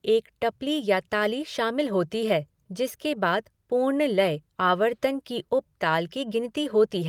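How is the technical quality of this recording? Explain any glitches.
No technical glitches can be heard anywhere in this speech recording. Nothing in it breaks up, stalls or distorts.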